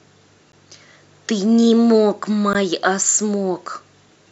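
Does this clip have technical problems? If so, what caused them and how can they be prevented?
Yes. The speech drops into two brief holes of silence, one at 0.52 s lasting about 12.5 ms and another at 2.53 s lasting 16 ms, with smeared edges, after which the sound resumes exactly where it left off. These are gaps at a join of encoded pieces: the audio was encoded in separate segments of roughly 2 s each and spliced without trimming each segment's encoder start-up delay and final-frame padding. Prevent it by encoding the audio as one continuous stream, or by trimming encoder delay and padding at every join for gapless playback.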